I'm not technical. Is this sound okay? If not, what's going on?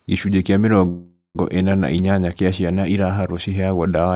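No. At 0.88 s the speech stalls for about half a second, until 1.37 s. The last sound is stretched into a fading buzz or hiss that drops to silence near the end of the pause. This is a call audio freeze, most likely from sound data arriving late on the call. The playback ran dry and filled the wait, then picked up where it left off, so nothing is lost, just delayed. The muffled, phone-like tone, with nothing above 4 kHz, comes from the call line itself.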